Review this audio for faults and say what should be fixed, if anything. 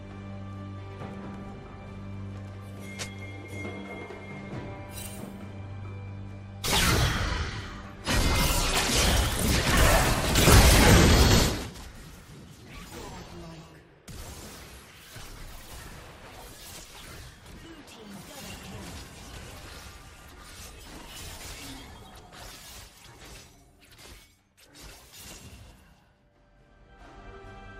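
No faults turn up in this audio, so nothing needs to be fixed.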